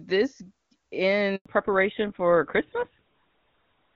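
At 1.36 s the speech cuts out for 100 ms, until 1.46 s. This is a handover gap: the call switched networks and no speech frames arrived. From 1.46 s to the end there is a fallback to narrowband. Nothing above 4 kHz remains. The speech turns duller and rougher, which fits a drop from HD Voice to an older codec such as GSM full rate.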